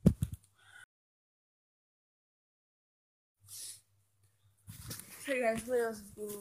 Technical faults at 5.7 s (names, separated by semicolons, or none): none